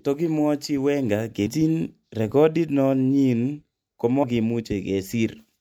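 At 1.45 s the speech jumps ahead by roughly a third of a second, and at 4.22 s by about a tenth. Both are compressed frames skipped, with whole chunks fitting a 26.1 ms frame missing or rejected. Overlapping frames leave a brief smeared blip at each join.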